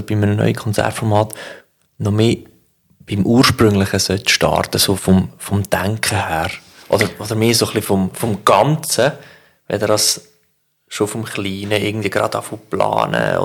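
Hard clipping runs through the whole speech clip: it's driven about 5 dB too hot, so a small fraction of peaks get sliced flat, leaving crackle on the loudest moments.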